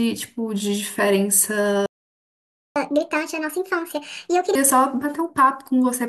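At 1.86 s the speech cuts out and the output stays silent until 2.76 s, a gap of about 0.9 s. This is a playback stall, most likely caused by the player running out of buffered data or having its output thread blocked, leaving nothing to send to the device.

From 2.76 s to 4.55 s the player does a catch-up at higher speed, working through the backlog by resampling at 1.5 times normal speed. The voice sounds rushed and raised by about seven semitones, then returns to normal speed and pitch.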